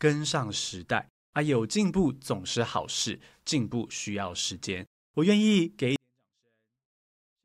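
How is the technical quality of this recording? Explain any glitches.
The speech plays cleanly until 5.96 s. Then a 24-bit alignment error makes it nearly vanish. From 5.96 s to the end, 24-bit samples sitting in the low bytes of 32-bit words are read as full 32-bit values. The level falls by about 48 dB at once. The sound stays clean but is almost inaudible.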